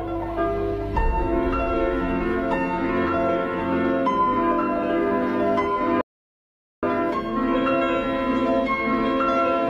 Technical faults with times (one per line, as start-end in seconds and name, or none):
6.01-6.83 audio dropout to silence